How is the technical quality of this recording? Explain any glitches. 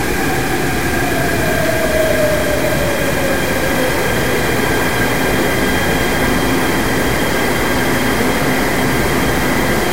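The technical quality is poor throughout, because a single fault affects the whole recording.

Low bit depth without dither runs the full length. The audio was likely truncated to something like 4 bits with no dither, so the rounding error tracks the signal itself. The result is a grainy, gritty distortion sitting only around ten decibels below the sound, with quieter passages breaking up and sputtering between coarse steps.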